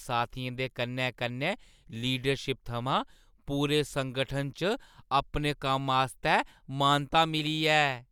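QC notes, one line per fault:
No faults found.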